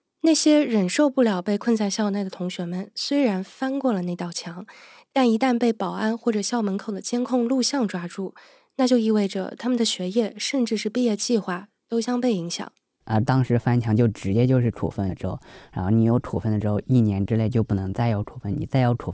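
Speech recording with aliasing throughout its full length. Sibilants come out gritty and metallic, and the spectrum stays busy right up to a hard edge at 8 kHz. That edge points to a drop from 48 kHz to 16 kHz made without an anti-aliasing filter, so energy above 8 kHz folded back down as false, unrelated tones roughly 25 dB under the speech. A clean band-limit would only dull the top end; here, inharmonic hash has been added.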